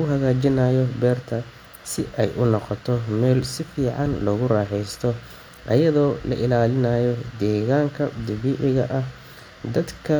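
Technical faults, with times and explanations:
No technical faults can be heard, so there are no times or explanations to give.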